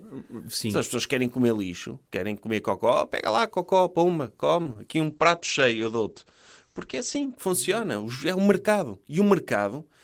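Just after "pega lá cocó pumba", short concealed packet loss at 4.63–4.67 s and 4.73–4.77 s: about 20 ms gaps filled by extrapolated sound, heard as brief smears, visible as blurred waveform patches. From 5.07 to 7.42 s, a call bitrate drop from 32 to 12 kbps makes the speech rough and muffled, and the spectrogram shows content cut off above 8 kHz instead of reaching 20 kHz.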